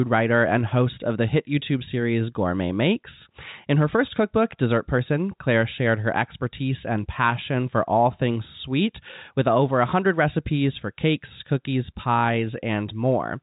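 Nothing in this speech recording stands out as a fault, and the telephone-band G.711 coding, with nothing above about 3.8 kHz, is just what you'd expect from an ordinary phone line.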